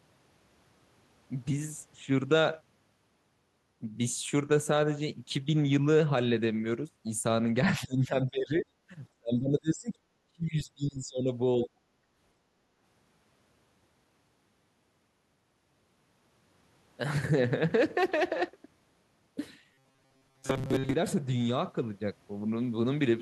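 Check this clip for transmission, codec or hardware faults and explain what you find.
Two kinds of fault turn up in this speech clip.

First, speech suppressed in double talk at 7.68–8.66 s, 9.12–11.3 s and 11.66–11.89 s. The voice dips by about 15 dB, then roughly 35 and 40 dB, nearly cutting out. Likely an echo canceller confusing talk over the far end with its own echo and ducking both.

Then robotic sound from repeated short buffers, 19.74–20.94 s. Most of that stretch is a rigid metallic buzz at 133 Hz. The likely cause is audio arriving too seldom, with a chunk of about 7.5 ms looped to fill the gaps.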